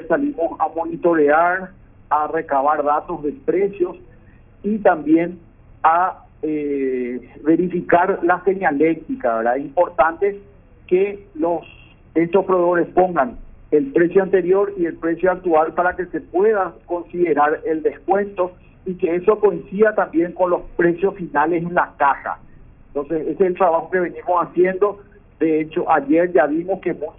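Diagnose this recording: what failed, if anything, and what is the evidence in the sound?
Aliasing from a sample-rate conversion stage runs throughout. High content folds back around 3 kHz into gritty, metallic tones unrelated to the source, roughly 30 dB below it, with energy pressed hard against that edge, which fits a new rate of about 6 kHz. A clean low-pass would sound dull, not harsh.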